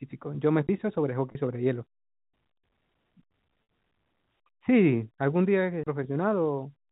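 At 0.67 s a CD skip occurs: the laser loses its track and lands on a different turn of the disc's spiral, so the player mutes for a fraction of a second and resumes elsewhere in the recording. It is heard as a tick and a brief gap, after which the speech carries on from a displaced point rather than where it left off.

From 1.32 to 1.35 s there is packet loss with pitch repetition. About 30 ms of audio never arrives, which points to a single lost packet. The receiver covers the hole by repeating the last pitch period, so the speech briefly sounds held and slightly buzzy instead of dropping out. A longer loss follows from 3.63 to 3.69 s, where 60 ms go missing, consistent with two consecutive packets. The repeated period fades toward silence before the speech returns through a short cross-fade.

A second CD skip comes at 5.83 to 5.87 s with the same mechanism: a mistracking jump, a slightly longer mute, and a tick as playback picks up at a different spot. 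All of this sits inside the narrow telephone band of the G.711 A-law coding.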